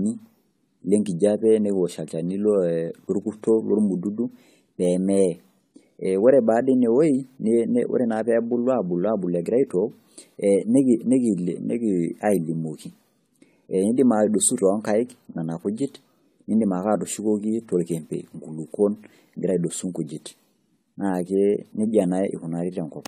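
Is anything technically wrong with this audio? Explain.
Yes. Throughout the speech there is generation loss: the sound is swirly, hollow and smeared, and consonant attacks are blurred, more than a single encode would explain. The likely cause is repeated AAC-LC decoding and re-encoding, about five passes at a rate that fits 64 kbit/s, each quantising on a shifted frame grid so errors pile up. A spectrogram would show a hard ceiling with nothing above 16.2 kHz, patchy holes in the upper bands, and softened onsets in the waveform.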